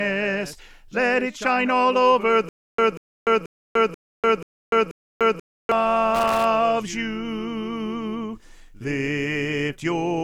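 From 2.49 to 5.72 s the audio shows a stutter with silent gaps: a 189 ms fragment repeats six times, every 485 ms, with 295 ms of digital silence between, likely from a stalled player or stream. At 6.15 to 6.45 s, loose connector crackle appears as a brief, irregular scratching burst from an intermittent contact chopping the signal.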